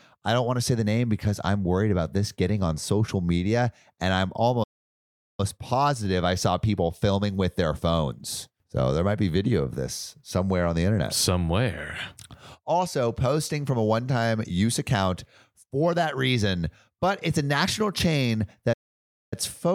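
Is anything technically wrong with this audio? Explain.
Yes, the speech has two playback stalls. The player likely ran short of buffered data or had its output thread blocked, so output falls silent mid-flow: from 4.63 to 5.40 s (about 0.75 s) before "positive I saw people", and from 18.73 to 19.34 s (about 0.59 s) after "it's a national chain".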